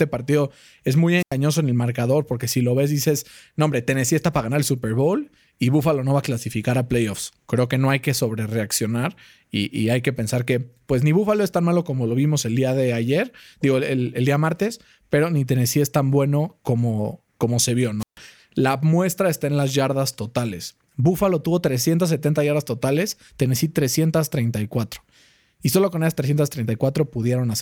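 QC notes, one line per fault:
1.17–1.34 s, wireless microphone squelch dropout: the RF link fades, there's a quick swell of hiss, and then the receiver's squelch shuts the output for roughly 91 ms before the speech comes back.
17.99–18.18 s, wireless microphone squelch dropout: same thing again but a longer hole, about 142 ms of near silence. Both sound like the receiver losing signal and gating itself to stop the static burst.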